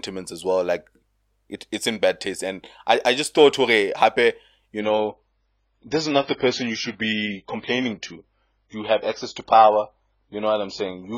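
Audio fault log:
4.80–11.17 s, adaptive stream at a lower bitrate: the stream switched down to a much cheaper encoding, and the audio stays there to the end of the clip. The speech shifts abruptly with no gap. Nothing is left above 7.1 kHz, so sibilance is dulled and air vanishes, while smearing and swirly codec artefacts rise. The change in bandwidth and texture fits an AAC-LC stream falling from about 96 kbit/s to 16 kbit/s after the connection slowed.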